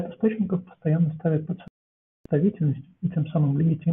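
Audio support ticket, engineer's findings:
Speech cuts to silence at 1.68 s and comes back at 2.26 s, so about 0.58 s gone outright. Classic digital broadcast dropout: receiver lost lock or frames failed checksum and it muted, consistent with a run of around 18 dropped frames.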